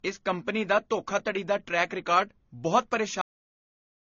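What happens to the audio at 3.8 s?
At 3.8 s the clip is inside a cut-off end, which runs from 3.21 s to the end of the file. Right after "ਦਾ ਟਰੈਕ ਰਿਕਾਰਡ ਬਹੁਤ" the speech stops mid-sound at 3.21 s and drops straight to digital silence, with no natural decay. The final buffers were never written or played out, so by 3.8 s nothing is left but dead, flat silence until the clip ends.

Running through the whole clip, including the audio just before that cut, is a dull, smeared band-limited quality with nothing above 7 kHz. Two different kinds of compression artefact are layered on top of each other. This is likely transcoding between lossy codecs, pointing to a low-rate AAC-LC encode followed by an MP3 encode around 40 kbit/s. The second codec spent its bits re-coding the first codec's damage and added its own, while the lower bandwidth limit carried through.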